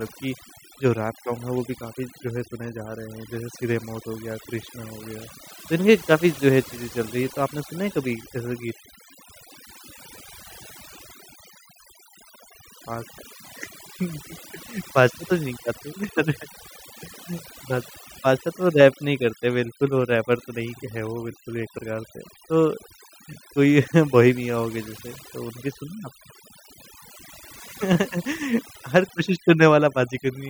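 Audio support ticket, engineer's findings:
Overdone noise removal, whole clip: denoiser cranked too hard, gating bands near its noise estimate. Background drops and breaks up into twinkly specks.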